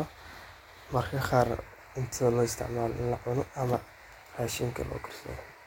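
No technical faults can be heard in this speech recording. There is no moment in it that stands out as a problem.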